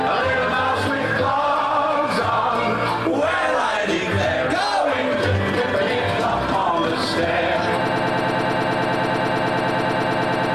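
From 7.89 s to the end, a broken-record loop repeats a 107 ms fragment back to back about 25 times, likely a stalled player or stream resending its last buffer.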